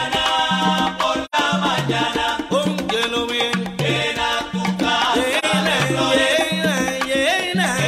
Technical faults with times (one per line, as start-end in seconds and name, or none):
1.25-1.35 AAC frame loss with muting
5.38-5.45 AAC frame loss with muting